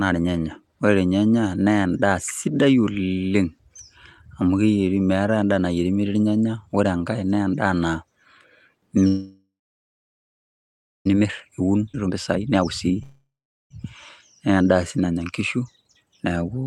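A call audio freeze runs from 9.07 to 11.07 s. The last sound is stretched into a fading buzz, then about 1.55 s of silence. The likely cause is packets held up in transit until the jitter buffer ran dry. Playback resumes exactly where it stopped, so nothing is lost, but the audio now trails by about 2 s.

Jitter buffer speed-up follows from 11.17 to 12.98 s. With the backlog of late audio now queued, the receiver trims short pitch-period slices again and again, running the speech at 123% speed with unchanged pitch. Roughly 0.4 s is shaved off, and the delivery sounds hurried.

Within that stretch, a skip ahead at 11.93 to 11.96 s drops about a second of speech outright. The audio is dropped, in transit or by an overflowing buffer, while later audio is already waiting, and the two sides are joined with only a 10 ms fill, so the jump is nearly seamless.

A second call audio freeze spans 13.03 to 13.72 s. 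The sound again trails off into about 0.42 s of silence, likely from another late packet run, and then continues without loss, adding roughly 0.68 s of lag.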